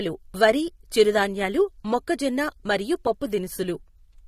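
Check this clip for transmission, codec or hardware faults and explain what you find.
The speech carries one fault, running through the whole clip: AAC compression, with the codec damage plainly audible. A low-bitrate AAC-LC encode is the likely cause, one that fits roughly 32 kbps, where coarse per-frame quantisation dulls and smears sibilants. A spectrogram shows a hard ceiling at 15.2 kHz with patchy, holed bands beneath it.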